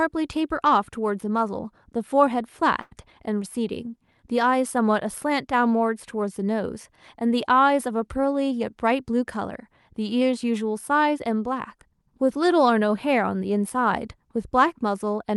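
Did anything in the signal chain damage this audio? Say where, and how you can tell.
Yes. There is a short stall from a late packet at 2.81 to 2.93 s, at the network and jitter buffer stage. The speech doesn't break. Instead the sound at that point is held unnaturally long, with a faint buzzy, slightly dipped texture. A packet missed its playout time, the buffer ran dry, and the receiver stretched the last sound by 98 ms. It then resumed exactly where it left off, so nothing is lost, but playback now runs 98 ms later.

There is a jitter buffer speed-up from 8.51 to 10.29 s, also in the buffer stage. Over this stretch the speech runs at about 105% of normal speed while keeping its pitch, so it sounds slightly hurried. The buffer had built up more audio than its target, so the receiver repeatedly cut out tiny pitch-period-length slices to catch up, trimming around a tenth of a second in total. 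The Opus call path itself, with audio reaching up to about 12 kHz, is not at fault.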